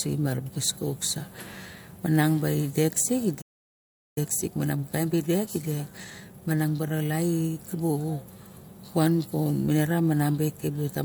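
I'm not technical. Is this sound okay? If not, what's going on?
No. At 3.41 s the speech simply stops and the line goes silent until 4.18 s, about three quarters of a second. This is a playback stall, most likely the player running short of data.

From 4.18 s to 7.18 s the speech runs hurried, about 1.15 times normal speed. This is time-compressed catch-up, the player trimming tiny slices to make up the lost time. Unlike a sped-up tape, the pitch stays normal.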